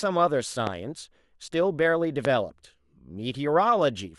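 At 0.67–0.69 s and again at 2.25–2.27 s a single loud pop sits on top of the speech, which continues underneath. Each peaks roughly 15 dB above the signal, most likely a brief voltage spike from a switch, static discharge or driver glitch.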